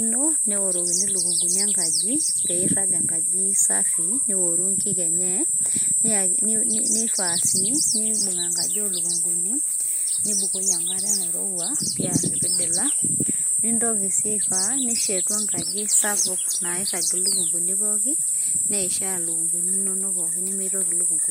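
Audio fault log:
No faults were found in this speech recording. There is nothing to list by time.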